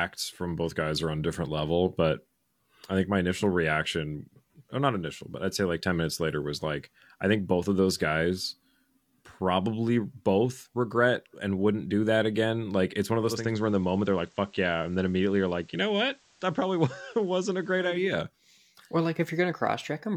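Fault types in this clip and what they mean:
Digital radio blending to analogue: from 13.16 to 18.16 s the receiver loses its digital stream and cross-fades, over about 0.4 s, to the station's FM broadcast, then returns to digital. The level drops by about 1 dB, and a faint hiss sits well below the speech. Both switchovers are gradual fades rather than hard cuts.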